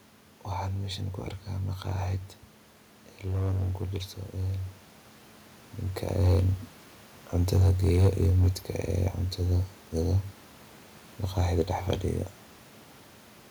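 It's a speech clip with hard clipping in four stretches: 3.27 to 3.98 s, driven about 6 dB past the limit; 6.03 to 6.39 s, about 4 dB; 7.36 to 8.47 s, about 5 dB; and 11.38 to 11.93 s, about 3 dB. The level hits a stage's ceiling there, the peaks get sliced flat, and those square tops spray harmonics up high, so you hear crackle on the peaks. The level change around 5.5 s is just the talker shifting.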